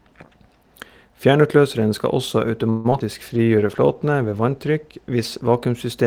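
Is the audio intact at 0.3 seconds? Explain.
Yes, at 0.3 seconds the speech plays through cleanly, with no dropout, click, distortion or other audible fault at that moment.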